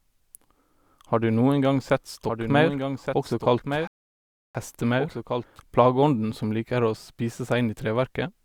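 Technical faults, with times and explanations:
1.51 to 5.60 s, doubled audio track: a second copy of the speech sits about a second behind the original and about 5 dB quieter, so everything gets an echo-like shadow that's dry and full-band, with no room tail. It snaps in and then cuts off cleanly just before "plageånden som liker å". That pattern most likely comes from the audio being captured again through a slower path, or an edit leaving two copies out of step.
3.87 to 4.55 s, rebuffering stall: the sound drops to silence for about 0.67 s and then carries on exactly where it stopped. Nothing is skipped, so the clip just gets longer by that gap. It's the player running dry on downloaded audio and waiting for more to arrive before it resumes playback. Because it lands inside the doubled stretch, the playback freezes and the lagging copy picks up again afterwards.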